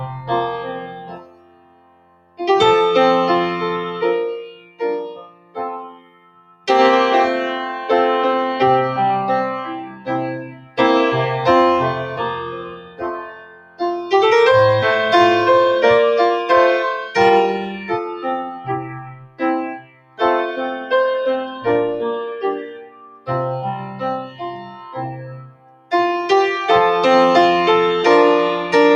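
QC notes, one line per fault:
throughout: noise suppressor applied to music or sounds. A suppressor tuned for speech stays engaged and treats sustained material as noise, so level swings by around 20 dB. Attacks pass while held parts and tails sink, giving pumping rather than a fixed fade.
0.65–2.4 s, 4.47–6.67 s, 9.81–10.08 s, 10.41–10.79 s, 12.52–13.81 s, 17.64–20.21 s, 22.66–23.29 s, 23.8–25.92 s: sound cut by the noise suppressor. Steady stretches are pulled down by about 12 to 19 dB and decays end early. Onsets survive, unlike a dropout, which would cut everything.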